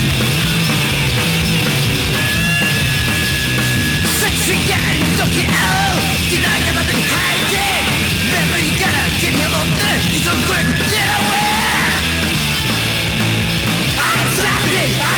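No technical faults can be heard anywhere in this audio. Nothing in it calls for a timed description.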